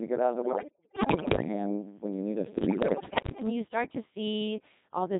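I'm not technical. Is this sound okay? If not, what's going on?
No. The whole recording has passed through a Codec 2 vocoder, a very compact digital radio voice system. Instead of sending the actual sound, it sends only a rough description of the voice: its pitch, loudness and tone colour. The receiving end rebuilds the voice from pure tones. That is why the speech sounds robotic and buzzy from start to finish, and why it sounds heavily damaged. It is not the hiss or muffling of ordinary poor reception.

On top of that, there are two bursts of bit errors on digital voice radio. The first runs from 0.42 to 1.48 s, right after "get out of the". The second runs from 2.58 to 3.50 s, right after "when you need us". In these stretches, a large share of the transmitted data was corrupted, probably near the edge of radio coverage. Each corrupted piece changes how a short slice of voice is rebuilt, so the voice suddenly jumps in pitch and loudness and turns into warbles and bleeps. 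This is different from a dropout, where the sound goes silent.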